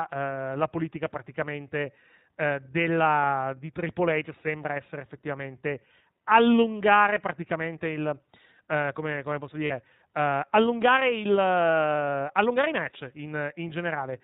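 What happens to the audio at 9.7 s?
Right after "come come posso", from 9.66 to 9.72 s, lost iLBC frames leave a gap of about 40 ms, which fits two 20 ms frames. The decoder fills it with a repeated, noise-mixed pitch cycle, so it sounds like a brief buzzy held vowel rather than a silent dropout, and the voice recovers immediately. The iLBC codec's narrowband sound, with nothing above 4 kHz and a plainly audible synthetic roughness, runs through this moment as well.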